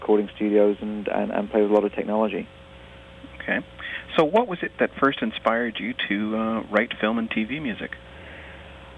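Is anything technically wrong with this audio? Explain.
No, nothing technically wrong can be heard here.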